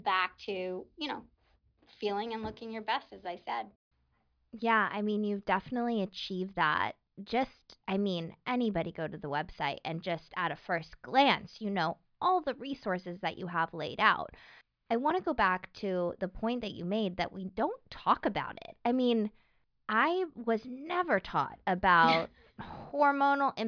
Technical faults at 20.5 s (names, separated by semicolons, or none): none